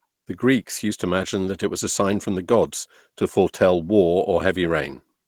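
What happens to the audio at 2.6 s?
At 2.6 s the speech carries Opus voice compression, present across the whole clip rather than at that instant. A linear-prediction core codes the lower band coarsely and a thin transform layer covers the top, so the voice sounds plainly hoarse and slightly robotic. The treble stays present, which sets it apart from a band-limited codec. This points to a low rate of roughly 16 kbps.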